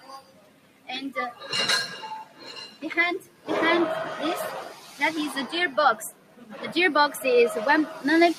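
A speech-tuned noise suppressor applied to music or sounds runs the whole way through, mistaking sustained sound for noise and swinging the level by around 10 dB, so things pump and thin out. You can hear sound cut by the noise suppressor at 0.0–0.89, 2.25–2.52, 2.68–2.83, 3.2–3.48, 4.7–5.0, 6.11–6.64 and 7.88–8.04 s. Held parts sag by about 9 to 10 dB, and by only about 6 dB at 4.7 and 7.88 s.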